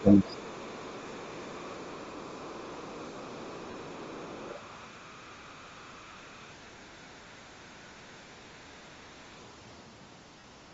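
Across the whole recording the speech has a breathy, grainy edge, with the upper frequencies sounding thin and noise-filled rather than crisp. The coding damage is plainly audible. The most likely cause is Bluetooth LC3 compression, which fits a 32 kbps stream with 7.5 ms frames. At that rate the transform codec discards much of the high spectrum and fills the gap with noise, so fine detail turns to hiss-like texture.

From the start to 0.37 s the talker's level sags and breaks up, falling by about 15 dB at its deepest, for roughly 0.3 s in total. This is likely speech suppressed in double talk. Both ends were speaking together, and the echo canceller could not tell the local voice from the loudspeaker echo, so it pulled both down at once.

From 0.00 s to 6.69 s a faint second voice sits underneath, around 25 dB below the main talker. This is likely the other side's voice leaking through. 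The far end was playing on the talker's loudspeaker, and the microphone picked it up. The echo canceller left a residue instead of removing it completely.

At 3.70 s the sound briefly smears into a noisy blur for 37.5 ms, which fits five lost frames. At 10.39 s the same happens for 45 ms. Both are lost LE Audio frames. When packets went missing, the LC3 decoder concealed the gap by repeating the last spectrum with scrambled phase, so for that moment the tonal content turns into a short burst of grainy noise.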